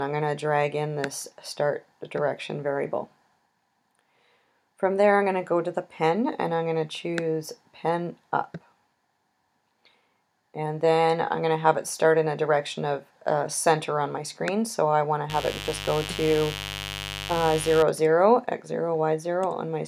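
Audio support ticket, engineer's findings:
Mains buzz, 15.29 to 17.83 s. Steady raspy buzz sitting roughly 10 dB under the programme, then gone. Built on 50 Hz. Suspect a dimmer, a rectifier or an unshielded run letting sharp switching spikes in twice per cycle, which is why the harmonics climb up to several kHz. Worth checking what gets switched on around that point.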